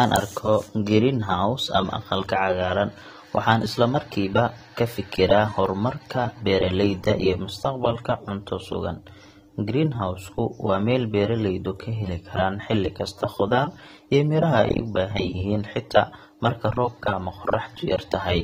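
Throughout the speech, the likely cause is AAC compression at a low bitrate, consistent with AAC-LC around 32 kbps. The encoder discards everything above 16.4 kHz and coarsely quantises what remains, so the audio sounds dull and smeared, with fizzy, warbling sibilants.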